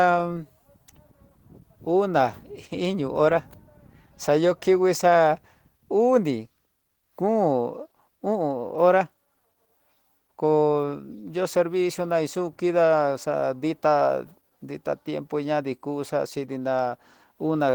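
Speech with plainly audible damage throughout, likely from Opus compression: a muffled, hoarse, grainy texture that fits a low bitrate around 16 kbps in hybrid speech mode, although content still extends to about 20.1 kHz.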